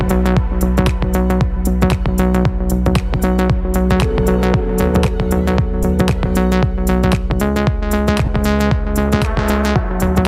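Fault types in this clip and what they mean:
Lost LE Audio frames: dropped LC3 frames get patched by reusing the last spectrum with random signs, giving brief noisy smears at 5.83 s and 8.25–8.28 s.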